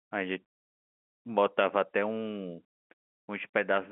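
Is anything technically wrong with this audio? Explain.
No, nothing is technically wrong.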